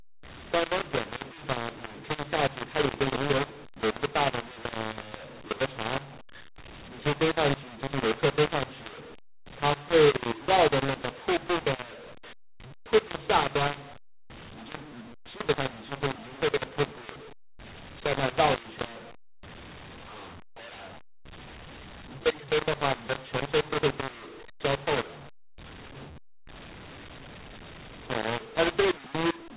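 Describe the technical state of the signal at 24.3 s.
At 24.3 s the speech carries the mu-law and A-law mix-up that runs through the whole clip: A-law telephone samples decoded as mu-law, scrambling levels into harsh distortion with hiss in pauses. The waveform looks jagged with a raised noise floor; the spectrogram shows broadband smearing below the 4 kHz telephone limit.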